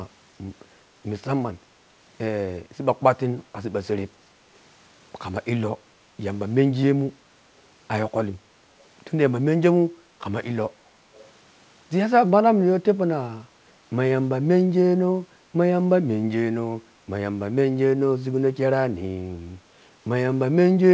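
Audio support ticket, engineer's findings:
Echo leak, 11.13 to 11.25 s. Brief faint delayed copy of the speech, about 370 ms behind, roughly 30 dB down. Likely a far-end loudspeaker/mic path where the echo canceller missed residual pickup and returned it. Band stops at 8 kHz, consistent with G.722 wideband.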